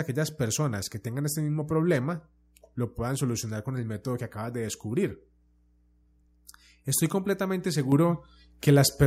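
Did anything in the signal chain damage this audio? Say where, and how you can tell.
Yes. A steady low 60 Hz tone with some low harmonics sits well beneath the speech from 0.94 s to the end: mains hum from a ground loop or a nearby transformer coupling into the analogue wiring.

At 7.92 s the speech and the hum jump up about 7 dB together, so the microphone volume was stepped up by call processing automatically raising the input gain.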